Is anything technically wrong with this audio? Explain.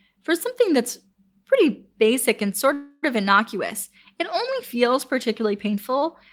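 Yes, there is one fault. From 2.73 to 3.05 s a call audio freeze stretches the last sound into a fading buzz, likely from a jitter buffer running empty. It shows as smeared, steady spectrogram bands, then speech resumes about 0.29 s later with nothing missing.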